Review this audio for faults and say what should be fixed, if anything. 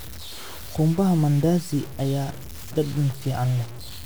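Low bit depth without dither runs through the whole speech clip. The grain follows the signal. Quiet passages turn gritty, and the softest moments sputter or drop out between steps. The distortion sits roughly 20 dB below the speech. The cause is likely a reduction to very few bits, around 5, with plain truncation and no dither. The error tracks the waveform instead of becoming steady hiss. Keep the full bit depth, and add dither before any reduction.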